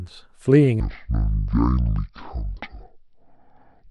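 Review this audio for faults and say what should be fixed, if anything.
From 0.8 s to the end, a section at the wrong speed: the speech slows abruptly to 0.503 times its recorded rate, with pitch dropping about ten semitones, deep and drawn out. This is likely playback or conversion at a mismatched sample rate. Preventing it means confirming the sample rate matches across every stage of the chain.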